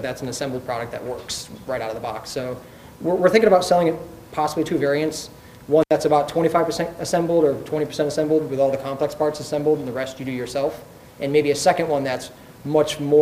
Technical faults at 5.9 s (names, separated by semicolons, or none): intermittent contact